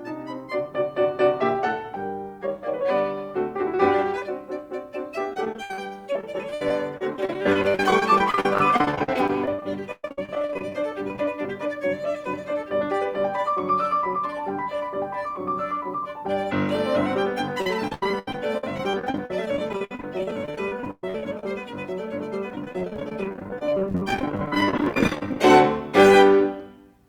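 Repeated packet loss (robotic sound) hits the music from 5.33 to 10.72 s, 11.08 to 11.28 s, 17.62 to 21.44 s and 22.50 to 25.37 s. Audio keeps dropping out, up to 120 ms at once. Each hole is filled by stretching the last sound. Roughly a quarter to a third is patched, so it turns choppy, with pieces missing.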